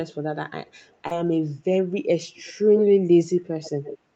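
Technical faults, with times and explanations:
0.10–0.14 s, 0.66–0.71 s and 0.87–0.95 s: echo leak. Brief, faint fragments of the speech return about 161 ms late, roughly 30 to 40 dB below the direct sound. The likely cause is a far-end loudspeaker whose echo canceller let small scraps of its pickup back through.
1.07–1.13 s: short concealed packet loss. About 40 ms of audio never arrived in time. The receiver filled about 35 ms by stretching the preceding sound and then crossfading back into real audio, which is heard as a short smear or wobble.
2.76–2.82 s and 3.64–3.99 s: echo leak. A delayed copy now trails by about 104 ms. The first burst is nearly as loud as the speech, at about 5 dB down. The second is longer and about 15 dB down. The likely cause is a loudspeaker echo path that the canceller failed to suppress.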